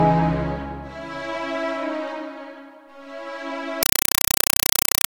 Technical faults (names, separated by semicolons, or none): compressed stream played as audio